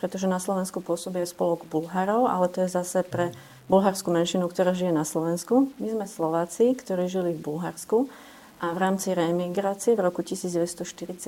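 Low bit depth without dither runs from start to finish, which fits an 8-bit word length, likely truncated. The rounding error tracks the signal at roughly 30 dB down, so quiet passages turn gritty and the faintest parts sputter or drop out between steps.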